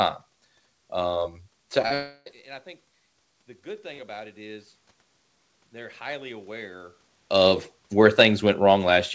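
At 1.82 to 1.86 s and again at 1.88 to 1.92 s the speech smears with a wobble. These are two short concealed packet losses: a few hundredths of a second each failed to arrive, and the receiver stretched the preceding sound to cover them.

Straight after, from 1.94 to 2.28 s, the sound turns into a fading buzz that thins to a moment of near-silence before speech resumes with a piece missing. This is likely a long network dropout, with the receiver extending the last sound until it ran out.

From 3.62 to 4.74 s the voice and the room background swell together by about 4 dB. This is automatic gain rising: the gain control judged the input too quiet and raised its level gradually over roughly a second.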